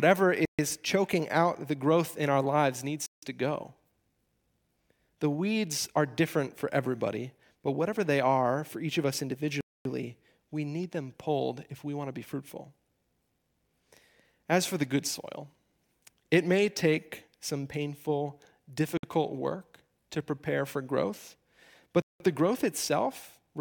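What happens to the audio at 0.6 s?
Just before 0.6 s the speech drops to silence for about 134 ms, from 0.45 to 0.59 s, then resumes with "choking out the growth". It is likely a Bluetooth stall, where delayed wireless packets emptied the playback buffer. The gap is clean silence rather than garbled or repeated sound.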